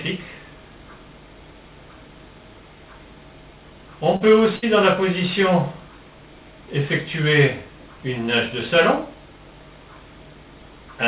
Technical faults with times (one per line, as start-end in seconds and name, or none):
4.16-4.22 short concealed packet loss
4.56-4.64 burst of packet loss